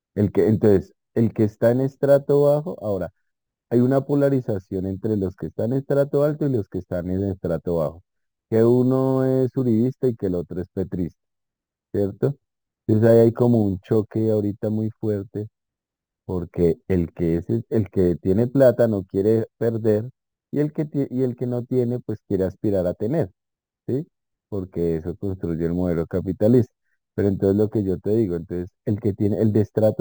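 All the way through, the speech carries imaging from sample-and-hold upsampling. It looks like the rate went from 24 kHz to 44.1 kHz by simply repeating samples with no smoothing. That folds a mirrored copy in above 12 kHz, about 32 dB down, heard as a faint metallic fizz that rises and falls with the voice.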